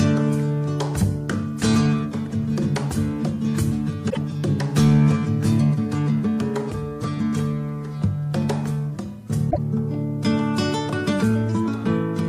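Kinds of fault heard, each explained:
Damaged data in a compressed stream: corrupted bytes made the decoder misread frames and lose sync, giving brief disruptions of about 0.11 s near 4.06 s and 9.47 s. On a spectrogram each shows as a narrow vertical break or smear, and the waveform shows a short discontinuity.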